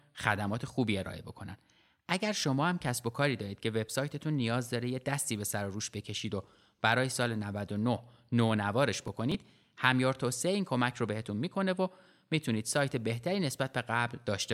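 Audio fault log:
9.0–9.3 s, processor overload crackle: the processor fell behind and dropped a handful of tiny buffers, around 3 ms each, so hard-edged gaps make a short gritty crackle.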